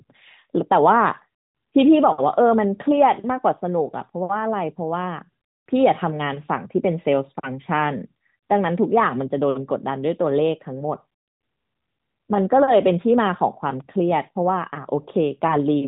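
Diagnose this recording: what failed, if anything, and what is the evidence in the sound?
Nothing in this recording stood out on listening as a failure at any stage of the chain.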